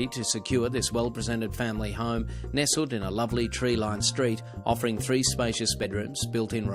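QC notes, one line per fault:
1.97 s, compressed frames skipped: the sound jumps ahead by about one 20 ms frame.
3.95–3.98 s, compressed frames skipped: another jump of roughly one 20 ms frame.
5.83 s, compressed frames skipped: this time about two frames go missing, roughly 40 ms of audio.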